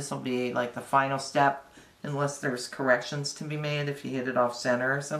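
No technical faults can be heard anywhere in the audio; the signal stays continuous and steady throughout.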